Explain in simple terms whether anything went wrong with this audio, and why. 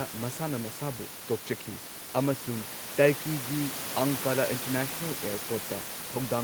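Nothing went wrong here.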